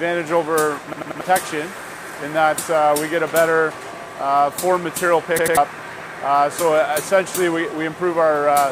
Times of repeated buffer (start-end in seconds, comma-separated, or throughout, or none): 0.93-1.21, 5.39-5.57